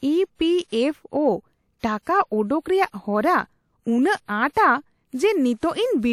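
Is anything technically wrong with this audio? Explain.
Yes. The speech shows pre-echo at 1.79–1.83 s, 4.25–4.28 s and 4.51–4.57 s, spreading 43, 33 and 54 ms ahead of sharp attacks. The codec's block-wide quantisation noise leaks before each onset. A brief hiss precedes it, and the attack sounds smeared.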